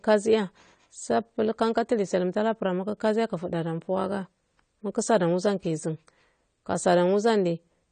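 Throughout, likely AAC compression at a low bitrate, consistent with about 32 kbps, removes everything above 9 kHz, leaving the speech dull, smeared and fizzy on sibilants.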